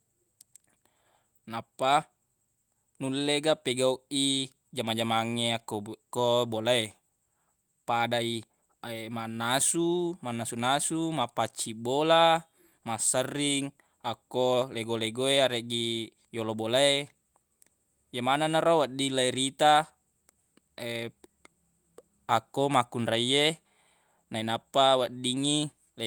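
Nothing technically wrong turns up anywhere in this speech recording, so there's no fault to point to here.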